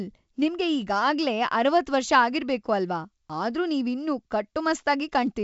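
No technical faults are audible in this speech. It comes through G.722 wideband telephone coding, consistent with the full 64 kbit/s mode, with nothing above 7.7 kHz and at most a faint trace of the coding.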